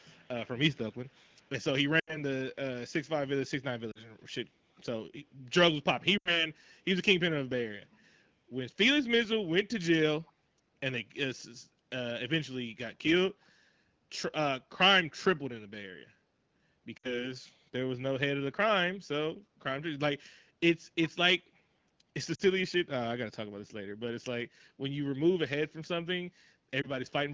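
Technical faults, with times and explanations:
0.00–0.28 s and 0.75–1.49 s, echo leak: the far end's echo canceller likely let part of its loudspeaker pickup through, so a delayed copy of the speech returns about 364 ms late, roughly 35 dB below the main speech.
1.99–2.18 s, 3.92–4.01 s, 6.17–6.47 s, 16.97–17.32 s, 22.35–22.42 s and 26.82–26.90 s, lost AMR speech frames: radio errors corrupted frames (about 80, 40, 80, 60, 40 and 20 ms lost), so the wideband decoder repeated the last good settings with falling gain. The longer runs sink to near silence, then the speech returns weak or rough.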